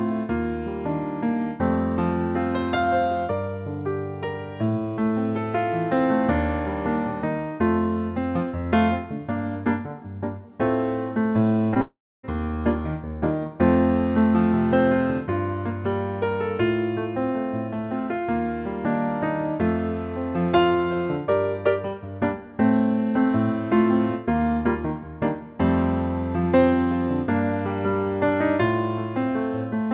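Short concealed packet loss at 11.74 s to 11.77 s: about 20 ms of audio never reached the decoder in time, so the receiver stretched the preceding sound across the gap before blending back. It comes across as a brief smear or wobble, narrowband like the rest of the 4 kHz-limited call audio.

Long network dropout from 11.81 s to 12.25 s: the sound carries on briefly as a fading continuation of what came before, then about 0.29 s of silence. The likely cause is around 0.42 s of audio failing to arrive. Playback resumes afterward without the missing stretch.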